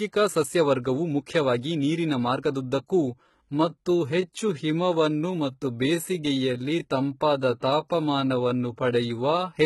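Throughout, heavy codec damage leaves gritty, metallic treble with nothing above 11.8 kHz, likely HE-AAC compression rebuilding the top band from copied lower bands, fitting roughly 16 kbps. From 2.93 s to the end, the speech abruptly drags at 0.715 times its pace while pitch holds steady, likely a time-stretched section repeating short pieces.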